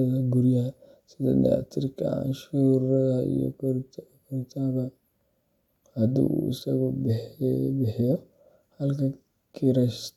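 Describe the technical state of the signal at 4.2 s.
At 4.2 s the speech signal is intact, with no audible dropout, distortion, glitch or other technical fault at that point.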